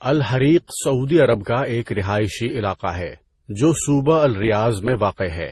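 From start to finish the speech has a smeared, swirly quality layered with a second, grainier roughness, and nothing comes through above about 12.1 kHz. That mix likely comes from transcoding between lossy codecs, with an MP3 pass followed by an Opus one, both at low rates that sound around 32 kbit/s. The second encoder wastes bits on the first one's artefacts and adds its own, and the lower cut-off from the chain stays.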